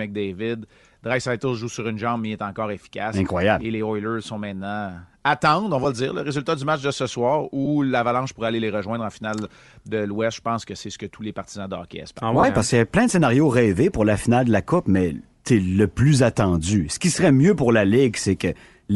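Throughout the speech a breathy, grainy edge sits on the upper frequencies, most likely from Bluetooth LC3 compression. The codec works in short transform frames, here fitting 7.5 ms ones, and at a bitrate consistent with around 48 kbps it zeroes parts of the upper spectrum and fills them with noise. On a spectrogram the high band looks patchy and speckled rather than showing clean harmonic detail, and the damage is plainly audible.

Lost LE Audio frames interrupt the speech three times. The first, from 5.83 to 5.86 s, falls right after "sont maintenant attendre on" and before "le dire le résultat". The second, from 7.65 to 7.67 s, follows "match de ce soir". Both last about 15 ms, which fits two 7.5 ms frames. The third, from 12.40 to 12.44 s, lasts 30 ms, fitting four frames. The decoder replays the last spectrum with randomised signs, so each gap sounds like a brief noisy smear. On a spectrogram harmonics give way to blurred noise, and the waveform loses its periodic shape.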